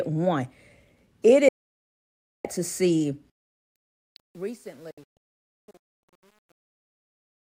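At 1.48 s the speech cuts out in a digital broadcast dropout, a fast fade to silence for about 960 ms while the receiver mutes bad frames. It comes back at 2.45 s. From 3.30 s the fade-out, which runs to 7.56 s, picks up truncation distortion, with too few bits and no dither. The quiet tail gets gritty, worst from 4.16 s, which fits roughly 9-bit resolution. A second dropout between 4.91 s and 6.13 s breaks into several short holes, the longest about 256 ms.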